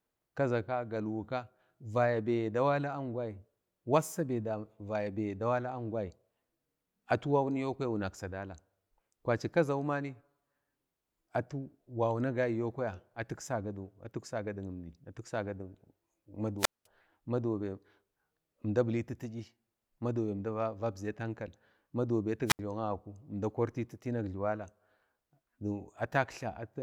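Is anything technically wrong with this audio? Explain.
Yes. Wireless microphone squelch dropout occurs twice, at 16.58 to 16.87 s and 22.46 to 22.59 s. The radio signal fades, hiss rises, then squelch mutes the speech for about 200 ms and 73 ms.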